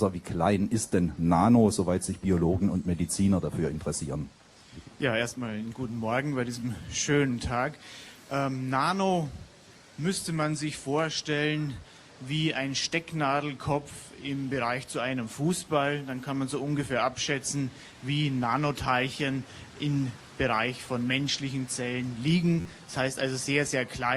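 At 22.61 to 22.65 s, fresh audio failed to reach the output in time, so the device replayed its last block, a repeated buffer, four extra times. Each repeat lasts about 11.6 ms, which fits a 512-sample buffer, giving a brief buzzing stutter with hard joins and roughly 50 ms of sound lost.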